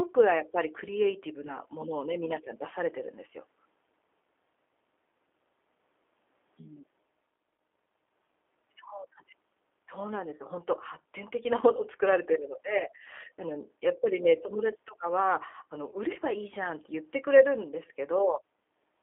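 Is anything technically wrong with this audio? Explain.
Yes. The whole clip carries G.729 codec damage. The speech is held to a telephone band of roughly 300 Hz to 3.5 kHz, with a plainly audible rough, slightly synthetic texture. This fits an 8 kbit/s G.729-family codec, which rebuilds each short frame from a vocal-tract filter, a pitch predictor and a handful of pulses. That pulse-excited roughness separates it from simple band-limiting, which would sound muffled but still natural.

There are also two points of VoIP packet loss concealed by the speech codec. The first runs from 1.47 to 1.58 s, and its length fits a single lost 10 ms frame. The second runs from 12.78 to 12.84 s and fits about 20 ms lost. In each case the decoder covers the gap by extending its last pitch and filter, so the sound smears into a brief buzzy tone or coloured noise that fades, rather than a silent hole or a click. 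It stays weak or distorted beyond the lost span itself because each new frame builds on the guessed one. This lingering recovery distinguishes it from a plain dropout.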